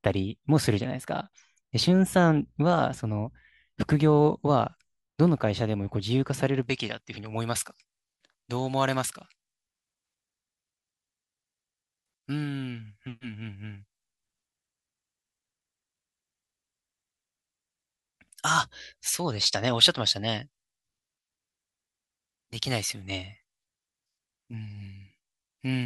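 From 6.63 s to the end, pre-emphasis is left on: the treble boost, consistent with a J.17 curve, is never undone, leaving about 11 dB excess at 10 kHz, so speech sounds thin and sibilant.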